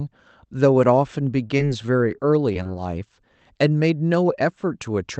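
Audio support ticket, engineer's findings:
Choppy, robotic patch from 1.47 to 2.67 s: repeated packet loss, six short dropouts, longest about 22 ms. Jitter buffer concealment stretching the last audio over each hole, roughly 8% of that span. Opus call path, top end stops near 8 kHz.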